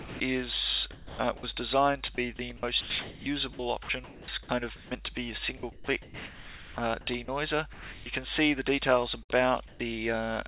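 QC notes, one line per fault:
0.00 to 0.20 s and 1.37 to 1.43 s, sound dropped by the voice detector: the sender's voice detector likely mistook part of the sound for background and stopped transmitting, so the receiver substituted comfort noise. At the opening, 0.2 s is filled with steady synthetic hiss and about 110 ms of real sound is lost. At 1.37 s a further 60 ms vanishes the same way before the sound returns as the detector re-triggers.
0.92 to 1.43 s and 9.23 to 9.80 s, comfort noise in place of the background: with no sound detected, transmission likely paused and the receiver generated noise loosely matched to the background. The real ambience, already limited to the 4 kHz telephone band of the call path, gives way to a flat, featureless hiss, roughly 330 ms of it in the first stretch and 177 ms in the second, before the genuine background resumes.
2.15 to 4.91 s and 5.57 to 8.06 s, sound chopped by the voice detector: the detector likely toggled repeatedly between sending and muting, cutting quiet passages and the edges of sounds and patching them with comfort noise, about 1.1 s in the first stretch and 1.3 s in the second. 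The result is choppy, with clipped onsets and tails.
9.23 to 9.32 s, burst of packet loss: a run of packets arrived too late or not at all, leaving about 60 ms of audio missing. The receiver extended the last sound it had for roughly 57 ms, fading it down, so a brief held buzz or decaying hiss replaces the real signal before playback jumps ahead to later material, with the section in between simply gone.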